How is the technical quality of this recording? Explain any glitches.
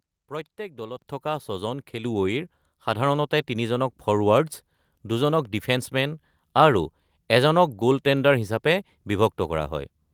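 Two level jumps stand out. At 1.02 s and again at 2.04 s the microphone volume is stepped up, about 8 dB then about 4 dB more, as the software decides the input's too quiet and bumps the device gain. Voice and background noise both leap louder together, abruptly.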